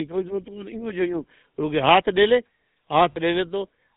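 From the start, the speech carries GSM full-rate codec damage. The codec rebuilds the vocal tract from a model driven by sparse pulses. It discards everything above 4 kHz. The result is a plainly audible buzzy, gravelly roughness, muffled at the top.

At 3.12 s come lost GSM frames, lasting until about 3.19 s. The gap is 40 ms, which fits two missing 20 ms frames. The decoder repeats the last good frame's settings. This leaves a brief rough, metallic ring.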